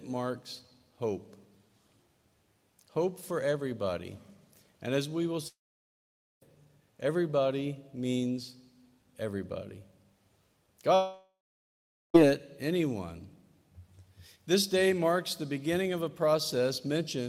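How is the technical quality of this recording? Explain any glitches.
The recording has two clear gaps where the sound cuts out. From 5.47 to 6.43 s and again from 10.95 to 12.16 s, the last bit of audio smears into a brief fading buzz and then drops to near silence for about 0.85 s and 0.8 s. When it returns, roughly 0.94 s and 1.2 s of material is simply gone. That pattern points to a long network dropout as the likely cause. Packets stopped arriving, the receiver stretched out what it last had, and when that ran thin it gave up and waited.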